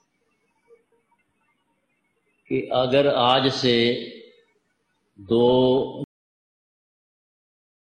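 At 6.04 s there is a single burst of damaged data in the compressed stream. It is heard as a brief chirp or blip that cuts across the sound. At that point some bytes in the encoded file were wrong. They may have been lost, zeroed or overwritten. The decoder could not read the frame correctly. It lost its place in the stream and had to search for the next valid frame header before normal playback resumed.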